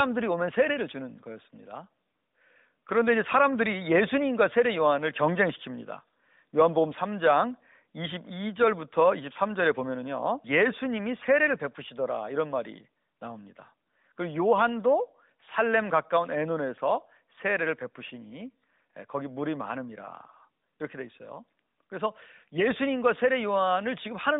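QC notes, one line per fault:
No faults found in this speech clip.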